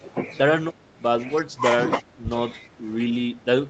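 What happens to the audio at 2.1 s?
Around 2.1 s the speech briefly sinks, roughly 10 dB down at its deepest, between 2.02 and 2.26 s, with about a fifth of a second affected in total. That's speech suppressed in double talk: the level drop, likely caused by both ends talking at once, looks like the echo canceller couldn't tell the near talker from the loudspeaker echo, so it pulled the whole signal down. You hear the speech duck briefly before it comes back.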